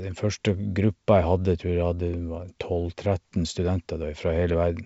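No technical faults can be heard in this speech, which comes through G.722 wideband telephone coding at 64 kbit/s.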